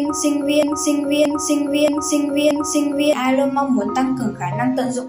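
A broken-record loop runs from 0.63 to 3.13 s: one 627 ms fragment repeats exactly four times, likely a stalled player or stream, unlike an echo's decaying copies.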